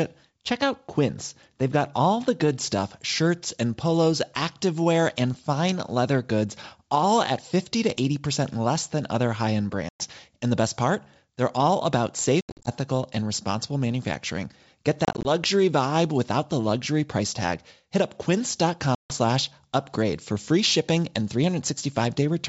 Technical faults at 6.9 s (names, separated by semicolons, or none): none